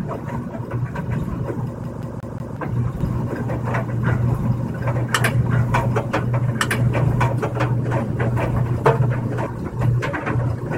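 From 1.84 s to 2.57 s the audio falls into a CD stuck on one turn. A scratch on the disc knocks the laser back one track at the same point in each rotation, so a 0.18 s slice of sound plays four times in a row, with a brief mute at every jump back. The result is the quick, evenly spaced stutter of a skipping CD before playback moves on.

From 3.01 s to 9.47 s a doubled audio track is audible. A second full-band copy of the sound runs about one and a half seconds behind the first, at roughly the same level, so every event is heard again after that gap. The copy carries no decay or room colour, and it starts and stops abruptly at those times. The likely cause is a second capture through a slower path, or an edit that left two unaligned copies.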